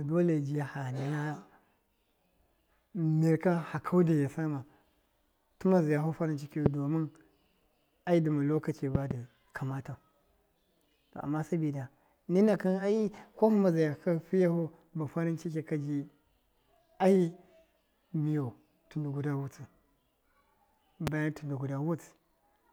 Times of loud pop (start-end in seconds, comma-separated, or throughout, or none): 6.66-6.68, 8.95-9.13, 21.07-21.10